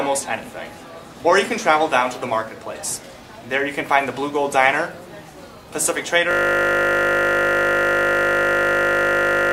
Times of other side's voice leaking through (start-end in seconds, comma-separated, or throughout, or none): none